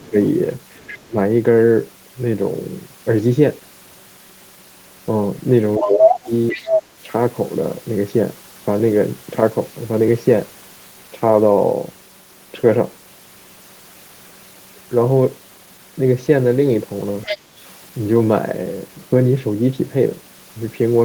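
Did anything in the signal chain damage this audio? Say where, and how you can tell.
Yes. Speech suppressed in double talk, in call processing: the level dips at 0.00–0.17 s (about 10 dB), 1.07–1.16 s (about 20 dB) and 5.77–6.59 s (about 15 dB). The waveform envelope sags, likely an echo canceller ducking both talkers.

The other side's voice is leaking through, also in call processing, at 0.77–1.06 s (about 20 dB under the speech), 5.78–6.82 s (about as loud as it) and 17.23–17.38 s (about 10 dB under). A second harmonic stack overlaps the spectrogram, likely residual loudspeaker echo the canceller missed.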